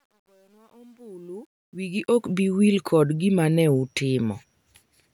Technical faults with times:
0.00-2.32 truncation distortion on a fade

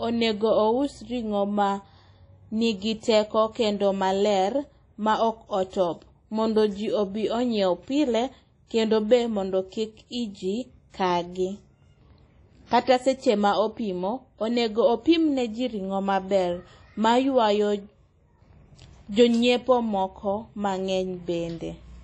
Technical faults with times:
0.00-22.04 WMA compression

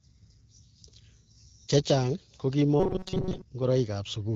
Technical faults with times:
2.80-3.42 robotic sound from repeated short buffers

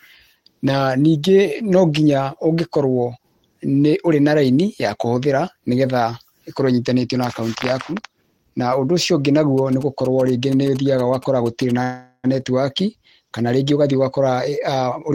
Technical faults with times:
9.58-11.71 GSM signalling bursts
11.83-12.26 call audio freeze
14.87-15.14 jitter buffer speed-up

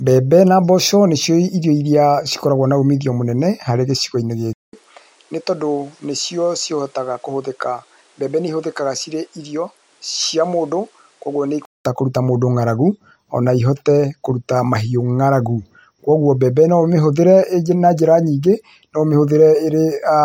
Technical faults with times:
4.53-11.85 input switched to a poorer device

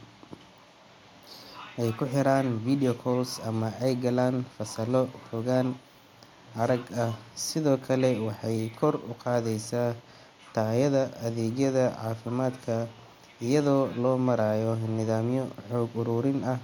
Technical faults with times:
none

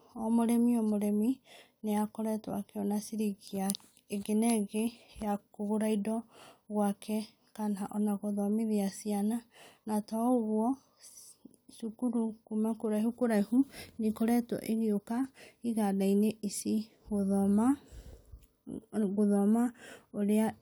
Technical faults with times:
none

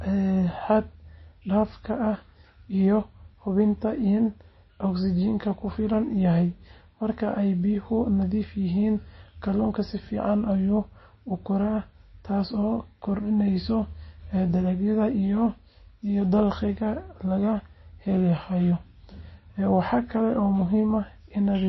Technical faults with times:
0.00-21.69 MP3 compression

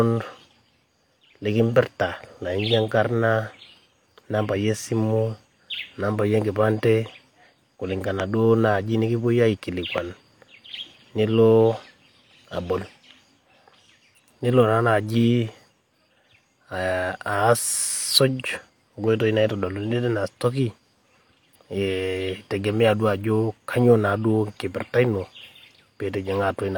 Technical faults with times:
8.20-8.22 loud pop
9.98-10.00 loud pop

